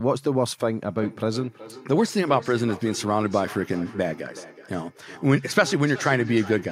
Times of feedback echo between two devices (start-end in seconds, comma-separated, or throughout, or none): 0.98-6.71